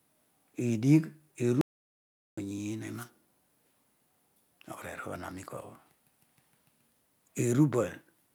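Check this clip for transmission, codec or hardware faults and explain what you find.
One fault is present. From 1.61 to 2.38 s, an audio dropout to silence cuts the speech for about 0.76 s. The input was likely lost while silence was written, leaving dead silence without room tone.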